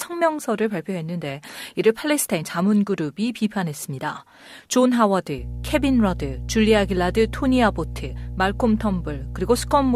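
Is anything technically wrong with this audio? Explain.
Yes. From 5.38 s to the end of the clip at 9.96 s, mains hum sits under the speech. It's a steady low tone at 60 Hz, roughly 10 dB below the speech. A ground loop or a nearby transformer is letting the power line leak into the signal path. Unlike wind noise, which is broadband and shifts about, this hum holds one fixed pitch and doesn't change level.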